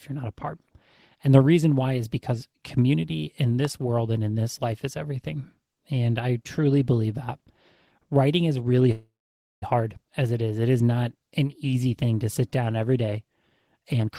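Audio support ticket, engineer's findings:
Loud pop at 3.65 s. Likely a voltage step or pulse from a plug, switch, static or driver glitch. Single sharp pop peaking a few dB above the speech, which continues underneath without interruption.

Call audio freeze, 8.91 to 9.64 s. Packets likely held up in transit, jitter buffer ran dry. Receiver carried the last sound on as a fading buzz or hiss, then roughly 0.53 s of silence. Speech resumes where it stopped, nothing lost, about 0.7 s added delay.

Jitter buffer speed-up, 13.80 to 14.08 s. Buffer overfilled, and the receiver cut short pitch-period pieces repeatedly to shed the excess, around 150 ms in all. Speech runs at 157% speed, pitch unchanged, sounding hurried.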